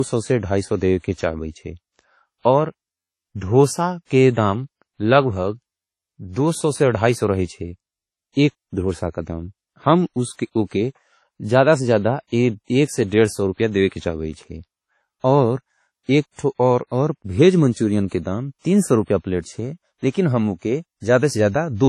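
From start to finish, the speech has a hard ceiling at 13.2 kHz, with nothing above it, and the smeared, swirly texture of heavy lossy coding. This is likely low-bitrate audio saved at a high bitrate: an early encode around 32 kbit/s (consistent with WMA) discarded detail, and a later MP3 at roughly 243 kbit/s preserved that damage. On a spectrogram, energy stops at a flat horizontal edge and the upper bands look blotchy.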